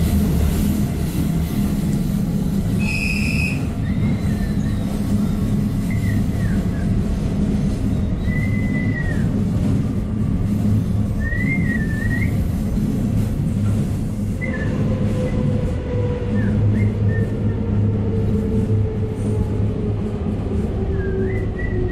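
Compressed frames get skipped at 2.58, 5.90 and 11.76 s. The sound jumps ahead roughly 0.1 to 0.2 s, which fits dropped 32 ms frames.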